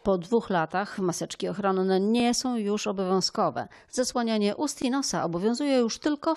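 At 2.20 to 2.22 s, after "maseczki ochronne", and again at 4.82 to 4.84 s, just before "i nosa", a brief stutter with a hard join: a repeated buffer. Late audio left the device replaying its last 20 ms piece once more, with nothing apparently lost.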